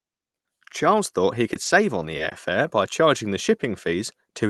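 From 1.53 to 2.33 s, after "thought he" and before "fare by charging the", the speech turns choppy and robotic. This is repeated packet loss: six short holes, none longer than 20 ms, each patched by stretching the preceding sound, covering about 15% of the stretch. Unlike a single dropout or steady codec roughness, the damage recurs in quick succession. The call codec's band limit sits near 12 kHz.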